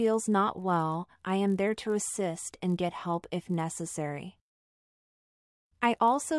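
From the start to the very end there's a 50 Hz buzz riding on the sound, the classic sign of a resampler restarted on every block. The conversion from 48 kHz down to 24 kHz was done in 20 ms chunks, each treated as if nothing came before or after it, so every chunk edge gets a small glitch. Those glitches line up fifty times a second and fuse into a buzz that follows the signal and drops away when it does.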